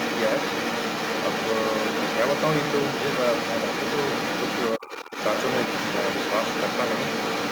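Right from the start there's sample clock jitter running through the whole thing. The converter's timing wanders by something like ten microseconds, so fast, loud parts of the speech pick up a gritty hiss sitting roughly 20 dB under the signal, which drops away in the pauses.

Also present across the entire clip is the other side's voice leaking through. A second talker sits only a few dB below the main speech. That's likely loudspeaker echo the canceller never fully removed from the microphone.

Then, from 4.78 to 5.16 s, you get speech suppressed in double talk. The main voice dips by around 15 dB for about a third of a second, most likely because the canceller couldn't separate the two overlapping talkers and turned both down.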